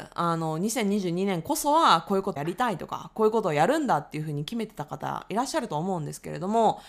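A brief glitch cuts through the speech from 2.31 to 2.37 s, about 56 ms long. This is damaged data in a compressed stream: corrupted bytes there make the decoder misread the frames, lose sync and hunt for the next valid frame header.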